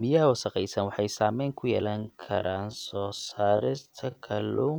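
Speech with a time-stretched section from 1.79 s to the end, slowed to about half speed (0.51×), likely from stretching software. Unlike a slowed tape, the pitch doesn't drop.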